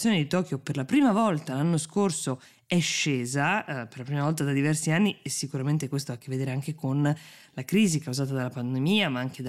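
Listening through the speech, nothing stood out as a technical problem at any point.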